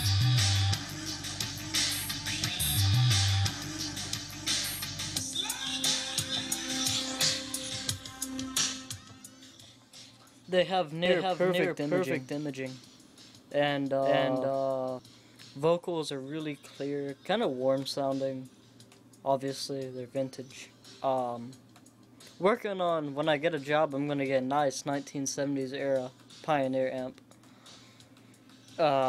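From 11.06 to 14.99 s there's a doubled audio track: a second full-band copy trails the sound by about half a second, roughly as loud, with no decay or room colour. It snaps in and out abruptly, likely a slower second capture path mixed in.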